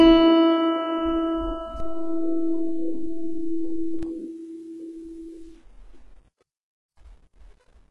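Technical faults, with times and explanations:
Throughout: HE-AAC compression, likely the cause of what you hear. Nothing comes through above about 11.4 kHz, and the treble that is there sounds synthetic. It's been rebuilt from copies of the lower bands instead of carried through. That's spectral band replication, so the upper harmonics don't line up with the real ones underneath. The damage is heavy here. Bright, percussive parts of the music come out gritty and metallic, which fits a very low bitrate around 12 kbps.
1.80 to 4.03 s: DC step. At 1.80 s the waveform's zero line suddenly jumps to an offset and stays there until 4.03 s, when it drops back. You get a low thump at each edge because the sudden shift in baseline acts like a tiny pressure pulse. The music itself carries on unchanged through the whole stretch, so the thumps sit on top of it rather than interrupting it.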